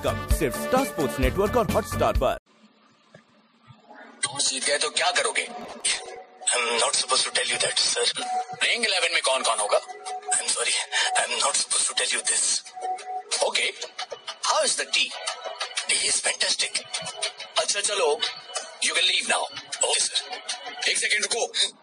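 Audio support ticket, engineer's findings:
Processor overload crackle, 5.61–6.17 s and 15.96–16.16 s. Gritty tearing bursts. Probable cause: CPU overrun in the audio processing path. Repeated missed deadlines on very short buffers, each gap filled with stale audio at hard edges. The first burst suggests dozens of misses.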